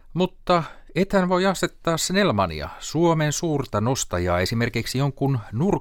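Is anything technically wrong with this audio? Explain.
No, nothing in this recording stood out as technically wrong on listening.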